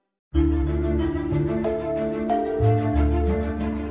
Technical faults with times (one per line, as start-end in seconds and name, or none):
none